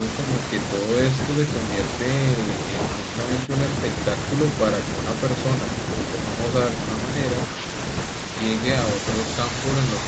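No technical faults can be heard anywhere in this speech, which comes through the call path with nothing above about 8 kHz, as the call's band limit allows.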